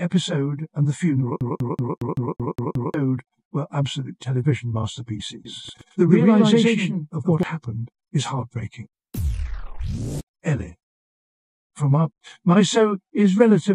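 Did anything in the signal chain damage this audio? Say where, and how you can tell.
Yes. The CD stuck on one turn runs from 1.40 to 2.94 s at the playback stage. The same 192 ms slice of audio repeats 8 times, with a brief mute at each jump, giving a fast, perfectly even stutter. A scratch is sending the laser back one track at the same point on every revolution of the disc, so the player rereads identical data until it breaks free.

A doubled audio track appears from 5.45 to 7.43 s. A second full-band copy trails the original by about a tenth of a second at roughly the same loudness. It has no decay or room colour, and it switches in and out abruptly at both ends. That rules out an acoustic echo and points to a routing or editing fault. The likely cause is either the signal being captured a second time through a slower path or an edit holding two out-of-step copies.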